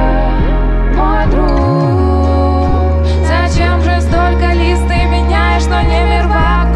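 Mains buzz runs through the whole clip: switching spikes twice per 50 Hz cycle leave a raspy harmonic buzz roughly 35 dB below the audio.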